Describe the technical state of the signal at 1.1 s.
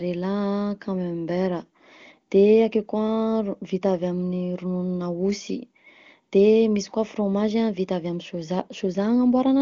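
At 1.1 s the speech is intact, with no audible fault and only the roughly 7 kHz top end expected of the AMR wideband (HD Voice) codec running at one of its higher rates.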